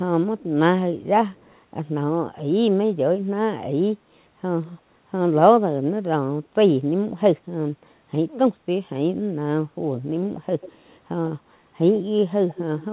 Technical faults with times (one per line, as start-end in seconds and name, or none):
0.38-0.43 echo leak
1.29-1.54 echo leak
10.61-10.72 echo leak
12.49-12.62 echo leak